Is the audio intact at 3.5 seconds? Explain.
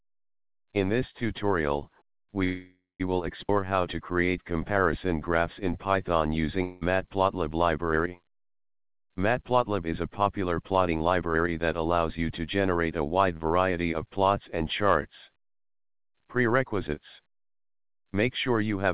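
No. A skip ahead occurs at 3.48 to 3.51 s. Roughly 150 ms of audio never reached playback, lost either in transit or discarded by an overflowing jitter buffer that already held later audio. The output jumps forward across that stretch with only a 10 ms fill, so the sound on either side is spliced almost directly together, and the timeline lurches ahead by about 150 ms.

Right after, from 3.53 to 5.08 s, comes a jitter buffer slow-down. With its reserve now depleted by the jump, the receiver rebuilds it by repeating individual pitch periods and small slices of pauses many times over, adding 144 ms. Playback runs at about 91% speed with unchanged pitch, so sounds stretch out and may warble slightly. This all plays through G.711 coding, which leaves nothing above 4 kHz.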